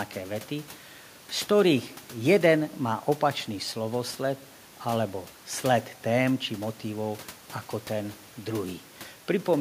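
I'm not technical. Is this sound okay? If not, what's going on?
Yes, nothing stood out as a problem when listening to this speech recording.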